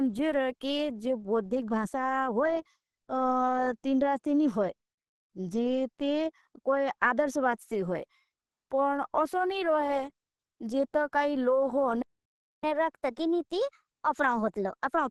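Throughout, the speech sounds hoarse and grainy, with nothing above 12 kHz. This is likely Opus compression in its hybrid mode, which fits a low bitrate near 16 kbps.

At 12.02 s the sound stops dead. A playback stall leaves about 0.61 s of silence until the player recovers at 12.64 s.

From 12.64 s to the end, catch-up at higher speed runs at 1.15 times normal. Pitch rises about two semitones as the backlog plays out.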